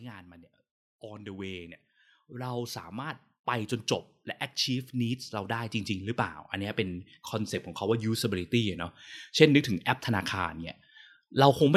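From 0.86 to 3.78 s, automatic gain rising lifts the level by about 9 dB as the gain control reacts to a quiet input; it repeats from 4.66 to 7.62 s, adding about 8 dB. Each time, speech and background noise swell together over roughly three seconds.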